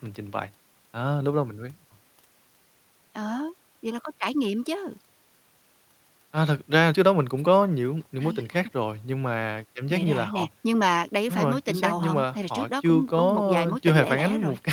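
Listening closely to the speech, nothing stood out as a technical fault at any point.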